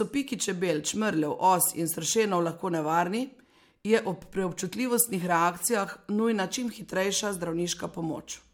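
Speech with generation loss throughout: swirly, hollow smearing and blurred consonant attacks, likely from about three MP3 passes near 100 kbit/s. A spectrogram would show shifting holes in the upper bands and nothing above 19.9 kHz, with soft, smeared onsets in the waveform.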